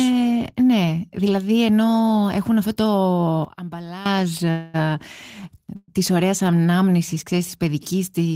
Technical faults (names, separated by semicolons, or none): sudden gain jump; call audio freeze